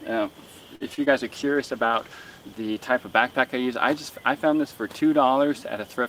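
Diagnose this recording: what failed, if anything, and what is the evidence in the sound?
The network stage shows a short stall from a late packet at 0.75 to 0.83 s. The jitter buffer ran dry and the receiver held the last sound for about 51 ms until the packet arrived, then resumed from the same point. Nothing is lost, so the sound is briefly stretched with a slight buzz or dip rather than clipped. That, and the lasting 51 ms added delay, separates it from a dropout.

Two short concealed packet losses follow, at 0.95 to 0.99 s and 1.05 to 1.08 s, each losing about 20 ms of audio that never reached the decoder. Concealment extrapolated the preceding sound and faded back into real audio, leaving a quick smear or wobble. Unlike the stall just before, audio is actually missing here, so a brief transient can vanish rather than merely being held longer.

From 1.38 to 3.46 s the codec shows a call bitrate drop. 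The bandwidth estimate fell and the encoder went from 32 kbps to 13 kbps, staying at its lowest for about a second. The sound turns rough or watery, and the top end dulls as high frequencies are cut. This lasts seconds and changes the timbre throughout, unlike the momentary network glitches, which are localized events.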